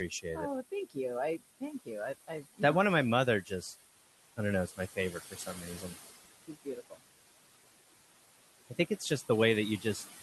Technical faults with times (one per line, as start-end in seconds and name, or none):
0.00-10.23 noise suppressor artifacts
0.09-2.60 speech cut by the noise suppressor
4.37-5.83 speech cut by the noise suppressor
6.48-6.99 speech cut by the noise suppressor
8.65-9.02 speech cut by the noise suppressor